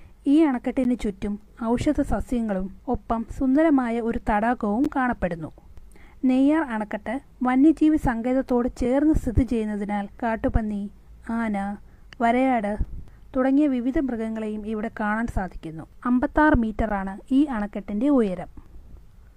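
A gap between stream segments occurs at 0.84, 4.85, 8.85, 12.85 and 16.89 s. Mismatched segment timestamps insert 3 to 15 ms of hard-edged silence every 4 s, and unlike a dropout, no sound is lost.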